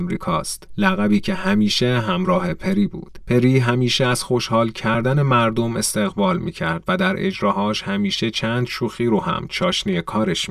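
The clip is speech with channel delay (comb filtering) throughout. One channel arrives around 5 ms late, and the two are summed to mono. Shared content cancels at evenly spaced frequencies, starting near 100 Hz. The result sounds hollow and phasey, with fixed notches.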